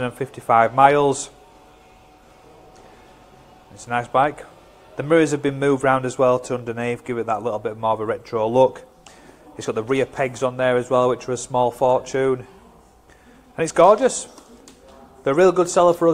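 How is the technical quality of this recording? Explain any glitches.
The recording has one continuous fault: a filter restarted on every block, producing a steady 25 Hz buzz throughout. The filter loses its state every 40 ms, so each block starts with a small transient, heard as a regular buzz that rises and falls with the level.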